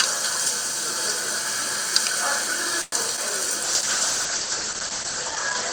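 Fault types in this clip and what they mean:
Call audio freeze: At 2.81 to 2.94 s the sound stretches into a fading buzz or hiss for about 108 ms, likely because delayed packets left the jitter buffer empty. It then resumes where it stopped, with nothing lost but everything after arriving 108 ms later, unlike packet loss.
Short concealed packet loss: Around 3.16 to 3.19 s, about 20 ms of audio is gone and roughly 10 ms of synthetic continuation patches the hole, giving a brief smear or wobble. Unlike a freeze, this removes real content instead of inserting a delay.
Call bitrate drop: From 3.65 s to the end the encoder falls from 48 to 9 kbps, staying at the lowest rate for about 1.5 s. The top end is cut from 20 kHz to 8 kHz, so the sound turns muffled and watery, a lasting change rather than a gap.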